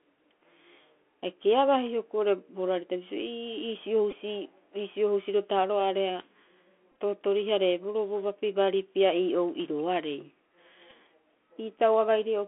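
Throughout, the speech sounds thin and boxed in, with scratchy s sounds and a grainy hiss beneath it, confined to roughly 250 Hz to 3.4 kHz. This is the Bluetooth CVSD headset codec, whose one-bit delta steps can't track fast, bright sounds, which fits a 64 kbps headset link.

At 4.11 s, a brief buzzy tick is a Bluetooth headset packet repeated: about 11 ms of lost audio, consistent with roughly three packets, was filled by replaying the previous packet. From 6.92 to 6.95 s, similar repeats scatter over about 68 ms, adding up to about 38 ms with the longest run around 10 ms, so a 267 Hz buzz flickers. From 10.90 to 10.92 s, another roughly 11 ms repeat gives a short tick.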